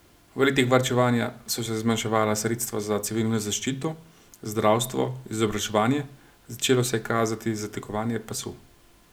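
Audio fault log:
No technical fault can be heard anywhere in the speech recording; the signal stays continuous and intact throughout.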